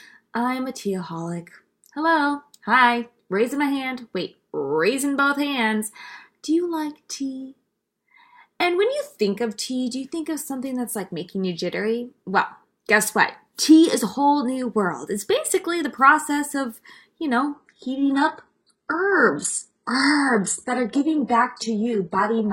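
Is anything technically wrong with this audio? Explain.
Yes. From 17.55 s to the end, the speech abruptly loses its sparkle: everything above 11.1 kHz is gone, and coding artefacts thicken, with no gap at the switch. This is an adaptive stream at a lower bitrate. The player dropped to a cheaper rendition when the connection slowed, and the sound fits a switch from roughly 96 kbit/s AAC to a 12 kbit/s HE-AAC version.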